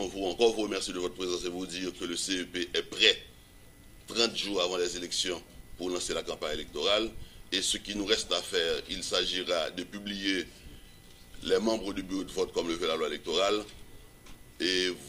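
Nothing goes wrong anywhere in the clip, so there's no technical fault to point to here.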